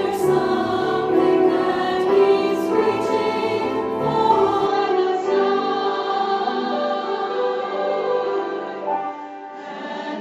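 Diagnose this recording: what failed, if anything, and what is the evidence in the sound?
The capture input likely switched to a poorer device at 4.66 s, with no gap and no level jump. From there to the end, nothing reaches above 7.6 kHz, so the sound turns duller, and a faint new noise floor appears, far below the signal.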